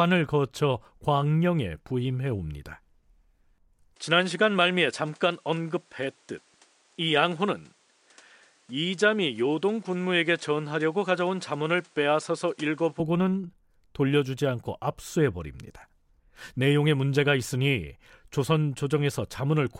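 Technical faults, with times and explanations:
3.96–13.0 s, input switched to a poorer device: the speech abruptly loses everything above 10.5 kHz and gains a new noise floor roughly 35 dB below the signal, with no gap and no obvious level jump, then clears again. This is likely a mid-recording change of capture device.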